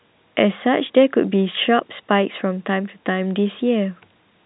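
No technical faults are audible.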